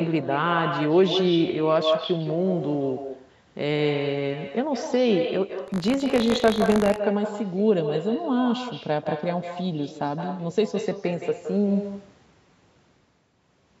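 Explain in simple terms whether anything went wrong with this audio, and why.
Every sentence is trailed by a fainter, thinner copy of itself about a sixth of a second later, for the whole clip. That is echo with no canceller. The other end of the call was playing the audio through a loudspeaker, its microphone picked it back up, and nothing on that side removed it. So the sound made the trip out and back and arrived as a quieter shadow just behind the original.

From 5.66 to 6.99 s the sound takes on a gritty, robotic buzz, a rattle repeating 50 times a second that is present only while there is sound to carry it. This is buffer tearing. Audio moves through the system in small chunks, here about 20 ms each. The program filling each chunk and the hardware playing it drifted out of step. Each chunk ended up with a tiny sliver of audio from roughly 40 ms earlier spliced in, with a hard seam on both sides.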